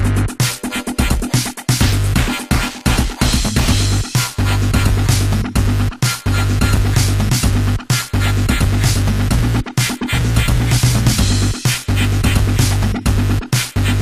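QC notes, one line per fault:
No faults detected on any path; the clip passes QC as heard.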